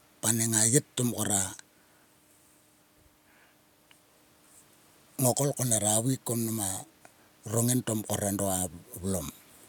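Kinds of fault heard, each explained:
No technical faults can be heard in this speech recording. There is nothing to list under any kind.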